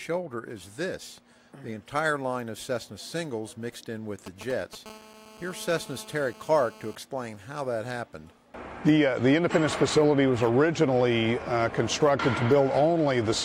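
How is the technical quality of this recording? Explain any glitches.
The recording is degraded by interference from a nearby 2G mobile phone, which appears in two stages.

From 4.26 to 4.75 s there are GSM signalling bursts. The phone sends brief groups of radio bursts, as before a call or text arrives, and the audio circuit rectifies them. The result is a galloping dit-dit-dit of short 217 Hz buzzes, roughly 15 dB below the signal. On a spectrogram these show as short, clustered stacks of harmonics.

From 4.86 to 6.95 s there is GSM phone buzz. During a call the handset transmits 217 bursts per second, and the rectified pulses produce a hard, raspy 217 Hz buzz about 23 dB below the signal and unrelated to it. A spectrogram shows a steady comb of evenly spaced harmonic lines, and the waveform carries a regular pulse train.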